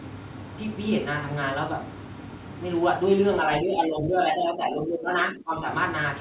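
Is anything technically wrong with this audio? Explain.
Yes, there's one problem. From 3.61 to 5.66 s, about two seconds, the speech sags and comes back unevenly, dropping by around 15 dB at its worst and sounding thinned out and choppy in places. That's speech suppressed in double talk. The likely cause is the far end talking at the same moment, so the echo canceller couldn't tell this talker from loudspeaker echo and pulled everything down together. The narrow band with nothing above 4 kHz just reflects the call path, which fits a G.711 mu-law link.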